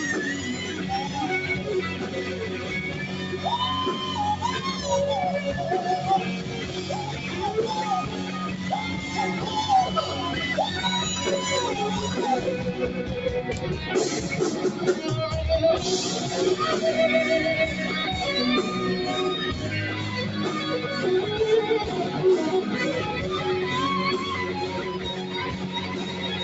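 A noise suppressor applied to music or sounds runs through the whole clip. It was built for speech. It treats steady tones, ambience and reverb as noise and pulls them down. Attacks pass through, but held parts and tails sink. The level swings by roughly 5 dB, so the sound pumps and thins. It flutters rather than sitting steady. The narrow top end, with nothing above 8 kHz, comes from the call path.

The first sound cut by the noise suppressor comes from 1.94 to 2.71 s. A sustained part dips by about 4 dB. The same happens from 6.35 to 6.84 s, again about 4 dB down. A third cut follows from 8.09 to 8.71 s, also about 4 dB deep. Each time the steady sound sags while sudden onsets stay intact. The result is a brief hollow, ducked moment.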